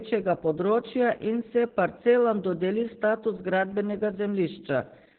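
Throughout, heavy Opus voice compression leaves nothing above 4.3 kHz, which fits a narrowband SILK mode near 8 kbps, so the speech sounds muffled, hoarse and faintly robotic.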